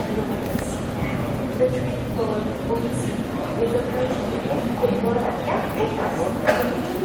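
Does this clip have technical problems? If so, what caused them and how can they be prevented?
No, nothing in this recording points to a technical problem.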